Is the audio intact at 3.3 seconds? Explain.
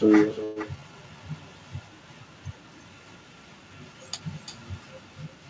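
No. At 3.3 seconds, as across the whole clip, the speech is trailed by a quieter, thinner copy of itself arriving roughly a third of a second later, at about 13 dB below the direct voice. This is echo with no canceller: the far end played the call through a loudspeaker, its microphone captured that playback, and nothing subtracted it before it travelled back through the network, so every phrase returns as a delayed shadow.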